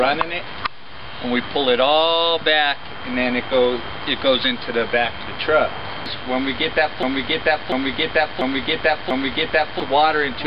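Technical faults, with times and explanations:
7.03–9.80 s, broken-record loop: A 0.69 s fragment plays four times back to back, with each pass identical to the last. The result is a stuck, stuttering cycle that fills almost 3 s. The likely cause is a stall in the player, encoder or stream, which kept sending the last fragment it held instead of new audio. Whatever should have played in that stretch is missing from the clip.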